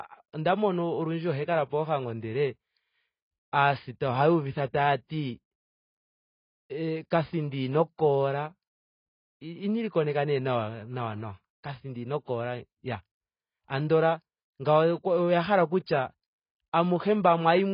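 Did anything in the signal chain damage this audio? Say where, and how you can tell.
Yes. Across the whole speech clip nothing reaches above 5 kHz, and what remains sounds dull and smeared, with warbling sibilants. That points to the codec stage, likely AAC compression at a very low bitrate near 16 kbps. A simple low-pass filter would leave the band below the cut-off clean, but here it is smeared too.

Pre-echo, also from the codec stage, appears as a brief hiss just before sharp attacks. It lasts 5.06 to 5.10 s, just after "aasita ohaa uvitha", and 12.24 to 12.27 s, after "nawa nawa kathindi ino", spreading about 35 and 33 ms. The transform spreads quantisation noise across its block, ahead of the onset. A click or dropout would not do this; here a soft noise leads into a blurred attack.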